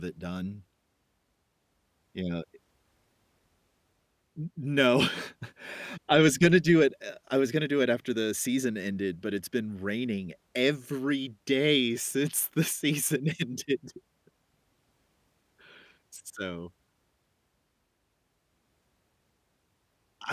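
A listener hears speech here with no technical faults anywhere in the recording.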